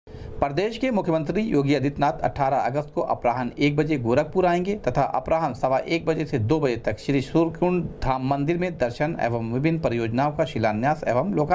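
No technical faults can be heard anywhere in this audio.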